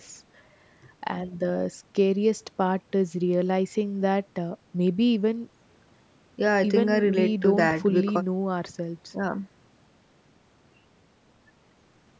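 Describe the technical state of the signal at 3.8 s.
At 3.8 s the speech is intact, with no dropout, click, distortion or other fault; it carries only the ordinary call microphone processing, which trims the lowest bass and leaves nothing above 8 kHz.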